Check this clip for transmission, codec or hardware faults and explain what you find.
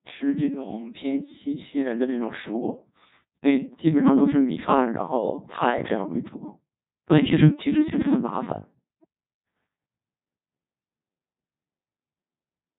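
One codec fault runs through the whole clip. The speech has passed through a Codec 2 vocoder. Only pitch, voicing, energy and spectral shape survive, rebuilt from sine waves. The result is heavily robotic and buzzy, with nothing above 3.8 kHz. The damage suggests a very low rate, around 1.2 kbit/s.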